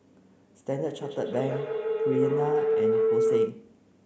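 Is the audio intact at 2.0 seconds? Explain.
No, at 2.0 seconds you're in the middle of a feedback howl running from 1.02 to 3.64 s. The mic-to-speaker loop keeps adding gain, so it swells into a tone around 400 Hz, pulsing roughly every 150 ms and peaking about 5 dB over the speech.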